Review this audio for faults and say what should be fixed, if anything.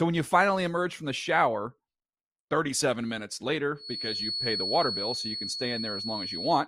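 From 3.74 s to the end of the clip there's a feedback whistle: a thin, steady tone at 4.4 kHz sitting just under the speech and swelling and fading slowly in level. The likely cause is a speaker-to-mic loop hovering right at the edge of feedback. Pull the mic gain down, keep the mic out of the speaker's path, or notch that frequency.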